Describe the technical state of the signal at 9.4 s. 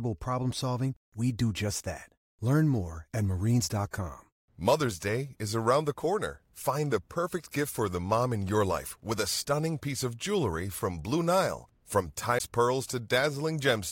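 At 9.4 s the speech signal is intact, with no fault to be heard at that moment.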